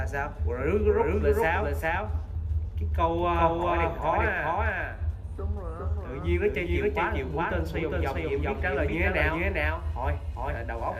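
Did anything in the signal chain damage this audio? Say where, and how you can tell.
Yes: a doubled audio track, likely from a second, slower capture path. An equally loud, uncoloured full-band copy trails the original by about 0.4 s throughout.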